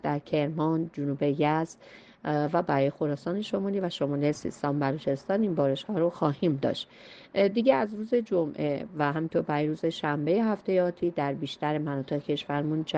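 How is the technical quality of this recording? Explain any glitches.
No technical faults are audible.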